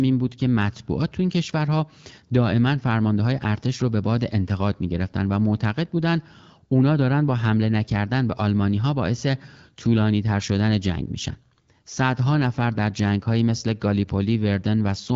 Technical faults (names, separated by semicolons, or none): none